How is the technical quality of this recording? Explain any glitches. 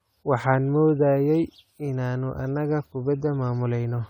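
The technical quality is compromised for the whole recording by generation loss. The speech has a swirly, smeared, hollow character and consonant attacks are soft. That points to the audio likely having gone through lossy encoding and decoding around five times, with an AAC-type codec at roughly 96 kbit/s. Each pass quantises on a shifted frame grid, so the noise and spectral holes build up. Nothing is left above about 19.9 kHz.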